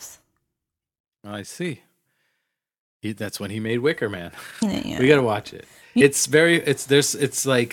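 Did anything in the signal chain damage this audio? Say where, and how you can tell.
Yes. This is damaged data in a compressed stream, at the codec stage. Two short disturbances cut into the speech, at 4.59 to 4.63 s and 5.97 to 6.02 s. Corrupted bytes there made the decoder misread frames, lose sync and hunt for the next frame header.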